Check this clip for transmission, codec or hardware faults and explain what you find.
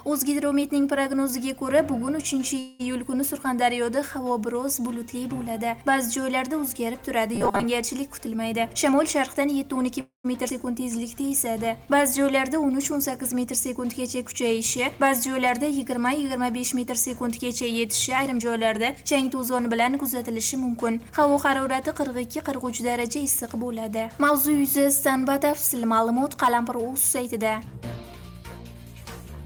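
Several network-related playback faults appear in the clip. They cluster around 8 to 12 s, with more later.

Call audio freeze, 2.59 to 2.81 s and 10.01 to 10.26 s. The likely cause is packets held up in transit until the jitter buffer ran dry. The receiver extended the last sound as a fading buzz. The first fill lasts 200 ms with no silence. The second lasts 238 ms and ends in about 110 ms of silence. Nothing is lost when playback resumes. Each gap simply adds delay.

Robotic sound from repeated short buffers, 7.35 to 7.66 s. The sound turns into a stiff, metallic buzz at 200 Hz. That pitch fits a 5 ms segment being looped, likely because new audio arrived too rarely. Roughly half of the passage is repeated material rather than real audio. The buzz still loosely follows the underlying sound.

Jitter buffer speed-up, 8.53 to 9.88 s, 13.98 to 15.35 s and 17.64 to 19.97 s. The buffer held more audio than its target, so the receiver cut out many short pitch-period pieces. 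Pitch stays the same while pace rises. The first stretch plays at 111% and loses roughly 150 ms. The second plays at 105% and loses about 70 ms. The third plays at 110% and loses around 200 ms. Each sounds hurried.

Skip ahead, 10.48 to 10.52 s. Right after the second freeze, playback jumps forward. Roughly 70 ms of audio is dropped, with only a 14 ms fill at the join. The two sides are butted almost directly together. This takes back part of the delay the freeze added. The result is an abrupt, clipped transition rather than a pause.

Jitter buffer slow-down, 10.80 to 11.53 s. The buffer was running low, so the receiver repeated single pitch periods to build a reserve. About 70 ms is added, and playback drops to 91% speed at unchanged pitch. The sound is drawn out and slightly sluggish.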